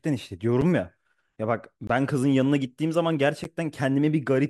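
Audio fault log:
0.61 s: block of digital silence, a roughly 7 ms dropout to zero with abrupt edges, heard as a tick; the waveform shows a flat gap and the spectrogram a thin vertical line.
1.87–1.90 s: block of digital silence, a 21 ms hole that fits a 1024-sample buffer left unfilled; the spectrogram shows a blank column framed by broadband streaks.
3.44 s: block of digital silence, an 11 ms zeroed stretch that fits a 512-sample buffer; it sounds like a tick or dip, with a flat waveform segment and sharp spectral edges.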